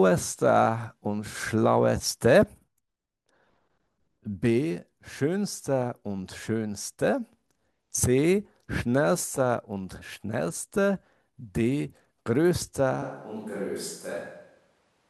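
At 13.02 s the voice suddenly turns roomy and hollow, with thinner bass, drops about 5 dB in level and sits over room noise only about 35 dB below it until the end. This is a switch to a distant microphone, likely because the close microphone failed.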